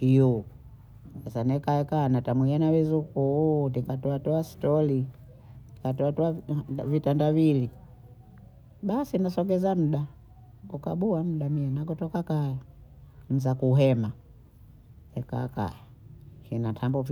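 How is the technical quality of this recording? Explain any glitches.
No technical faults or glitches are audible anywhere in this speech recording, so there is nothing to explain.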